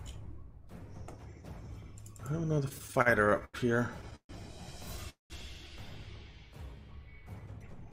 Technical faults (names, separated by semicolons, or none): repeated stalls (stutter); call audio freeze; jitter buffer speed-up